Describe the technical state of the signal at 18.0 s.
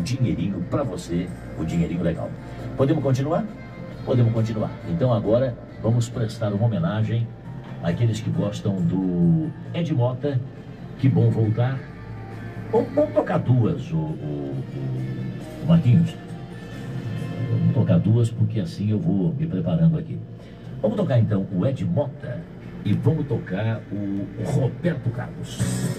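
At 18.0 s you're in the middle of a run of regular clicks that starts at 2.34 s and ends at 24.17 s, one every 2.43 s. These are likely clock drift buffer slips: two clocks disagreeing by roughly 70 ppm, so every so often a handful of samples gets dropped or repeated.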